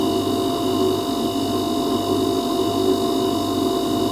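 No technical faults are audible anywhere in the recording.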